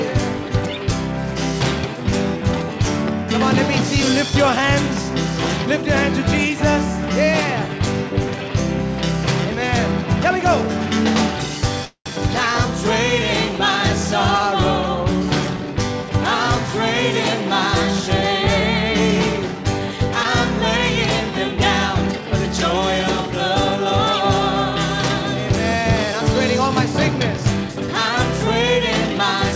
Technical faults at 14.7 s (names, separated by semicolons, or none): none